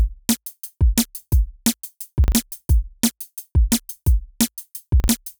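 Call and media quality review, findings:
Chunks out of order at 2.24–2.32 s and 5.00–5.08 s: brief jumbled stutter. Two 40 ms chunks swap places, the late one landing right after its neighbour. Nothing is dropped, but there are three hard joins each time. Probably a jitter buffer or reordering issue in the receive path.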